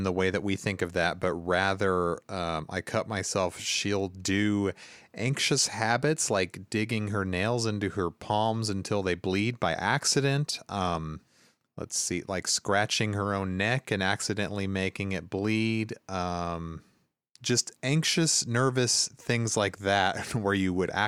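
No technical faults are audible anywhere in the speech.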